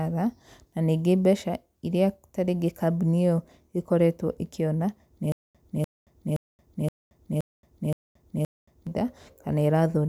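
From 5.32 to 8.87 s the stream likely stalled, replaying its last fragment at each retry and then running empty. The result is a stutter with silent gaps: a 295 ms burst of speech repeats seven times, each followed by 226 ms of digital silence. The speech meant for that stretch is lost.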